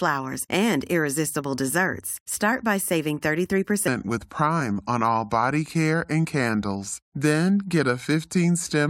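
From 3.88 s to the end at 8.9 s, the speech suddenly drops about four semitones and drags at 0.8 times its proper pace. This section at the wrong speed was likely caused by that stretch being played back against a slower clock than it was recorded with.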